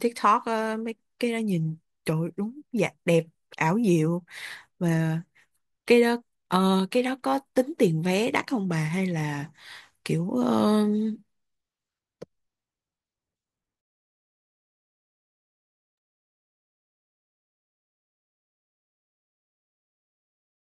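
No technical faults can be heard anywhere in the speech recording; the signal stays steady and intact throughout.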